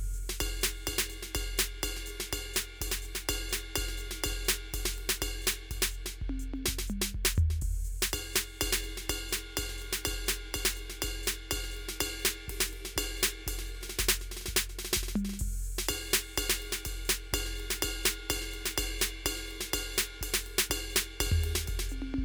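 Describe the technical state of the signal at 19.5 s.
At 19.5 s the music plays through intact, with no dropout, distortion or other fault at that point.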